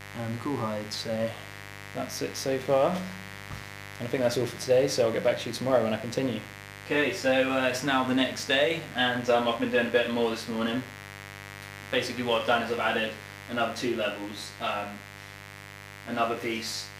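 From start to finish a steady, raspy mains buzz sits about 15 dB under the sound: switching spikes twice per 50 Hz cycle spray harmonics up into several kHz.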